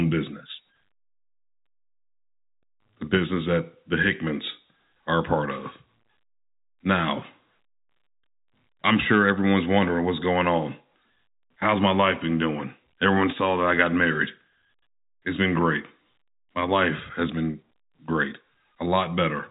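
The speech carries no technical faults; it comes through a normally working G.711 telephone path, with the band stopping at about 3.8 kHz as that format requires.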